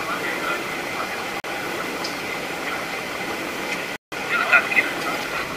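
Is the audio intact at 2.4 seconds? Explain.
Yes, the audio is intact at 2.4 seconds, with no dropout, click, distortion or other fault audible at that point.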